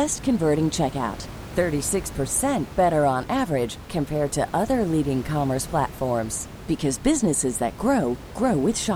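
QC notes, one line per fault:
Nothing to flag on this speech clip; there's just a bit of room noise sitting about 15 dB under the talking, which is part of the recording itself.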